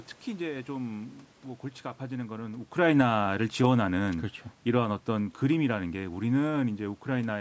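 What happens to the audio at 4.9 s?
The speech and its room background sink together, about 6 dB over 2.82 to 7.36 s: automatic gain falling, as the gain control gradually lowers its gain after judging the input too loud or its background noise too strong.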